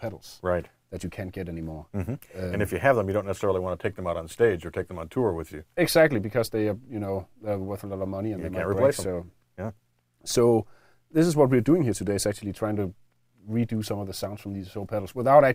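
No technical faults can be heard anywhere in this clip. Nothing in it calls for comment on the transmission or playback side.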